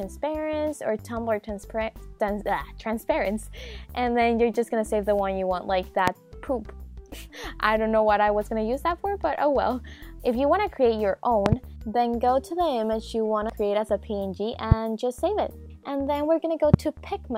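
Five loud pops cut through the sound. The first comes at 6.08 to 6.10 s, about 20 dB above the signal. At 11.46 to 11.55 s there's a double pop, two quick hits roughly 25 dB up. Single pops of similar strength follow at 14.72 to 14.74 s and 16.74 to 16.76 s. Each is a sharp thump with the sound carrying on underneath, likely from a voltage spike such as static or a connector glitch getting into the signal chain.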